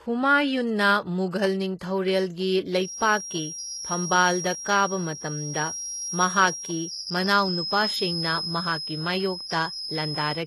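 Throughout, the speech carries plainly audible codec damage, likely from HE-AAC compression at a very low bitrate, around 16 kbps. Nothing is present above 12.3 kHz, and the upper band is synthesised from copied lower bands rather than coded, so its harmonics do not line up with those below.

From 2.74 s to the end, a feedback whistle sits at a steady 5.2 kHz, a few dB below the speech. The likely cause is a loudspeaker-to-microphone loop held just short of runaway, so a single high pitch keeps ringing behind the sound without building into a howl.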